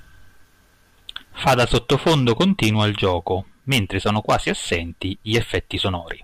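From 2.83 s to the end, the speech picks up a fine hiss and roughness that swells on loud and sibilant moments and drops away in pauses. This is sample clock jitter: timing wobble of a microsecond or two leaves an error roughly 35 dB below the signal.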